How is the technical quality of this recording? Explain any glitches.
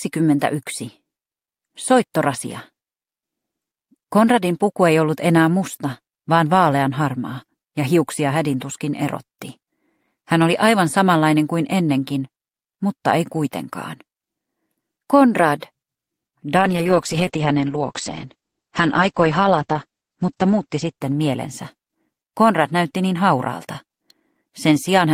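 The recording has one glitch, a call bitrate drop from 16.59 to 22.29 s. The connection's bandwidth estimate fell, so the encoder was told to spend far fewer bits. It coded the audio more coarsely. The sound turns rough and watery. The top end disappears, with content above about 8 kHz cut where it had reached 20 kHz. The bitrate falls from roughly 48 to 9 kbps, and the worst stretch lasts about 3.9 s. Then quality recovers.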